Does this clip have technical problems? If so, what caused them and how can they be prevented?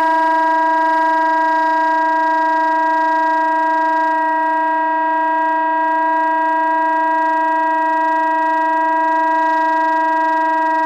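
Yes. Hard clipping runs through the whole clip: the loudest peaks of these everyday sounds were pushed about 2 dB past what a stage in the chain could pass, so their tops were sliced flat. Only a few percent of the waveform goes over the limit, so instead of constant fuzz you hear brief crackle on the peaks, caused by the extra high harmonics those flattened tops create. To prevent it, set recording and processing gain so peaks stay a few decibels below full scale, or use a limiter ahead of the stage that overloads.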